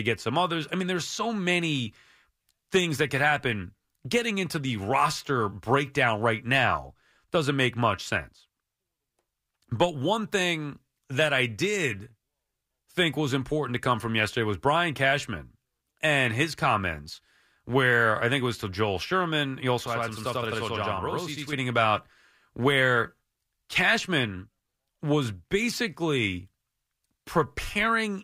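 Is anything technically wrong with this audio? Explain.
Yes. From 19.86 to 21.53 s, just before "about where", there is a channel delay (doubling). One channel arrives about 93 ms late, which fits a 4096-sample buffer, and the two are summed to mono. The late copy is heard at the same level as a doubling or single slap echo. On a spectrogram, each onset shows a duplicate about 93 ms later. The waveform shows every transient repeated at that spacing.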